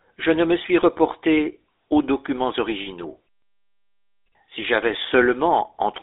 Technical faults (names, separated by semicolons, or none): GSM full-rate codec; lost GSM frames